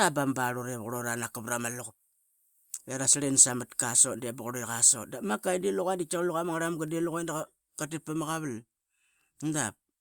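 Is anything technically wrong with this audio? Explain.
No, nothing technically wrong can be heard in this speech recording.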